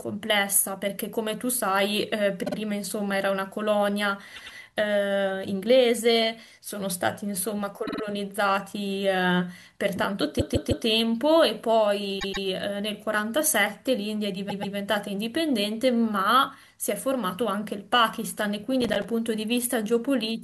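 At 2.44, 4.35, 7.85, 10.39, 12.19 and 14.49 s the speech stutters with repeated frames: a short run of compressed frames is decoded again, so the same slice plays two or three extra times. The repeated blocks run from 52 to 157 ms, consistent with frames of about 26 ms. The longest, at 10.39 to 10.86 s, adds 470 ms.

From 18.81 to 19.05 s there is processor overload crackle. The audio processing misses its deadlines for around ten buffers of roughly 5 ms each, and each missed buffer becomes a brief hard-edged silence. Over that quarter second the gaps fuse into a gritty crackle on top of the speech, which stops once the load clears.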